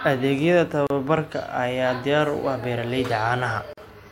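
At 0.87 s the speech drops into a gap at a join of encoded pieces lasting about 34 ms, and at 3.73 s a second one of about 44 ms follows. Separately encoded segments were butted together untrimmed, so encoder start-up delay and end-of-frame padding remain as silence. Each is heard as a brief dropout, then the speech resumes where it left off. A waveform shows near-silent stretches with smeared edges, and a spectrogram shows vertical blank bands, smeared at the borders.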